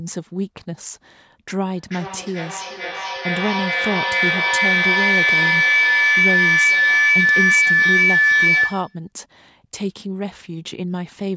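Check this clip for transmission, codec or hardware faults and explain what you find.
There's one clear fault here: a feedback howl running from 1.75 s to 9.11 s. What's happening is that two devices in the same room are both on the call, so whatever comes out of one loudspeaker gets picked up by the other microphone and sent around again, gaining level on each pass. The loop settles on a tone around 2 kHz, pulsing roughly every 400 ms, and it peaks at about 8 dB above the speech before it stops.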